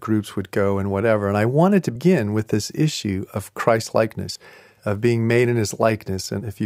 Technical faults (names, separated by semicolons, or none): audio missing between chunks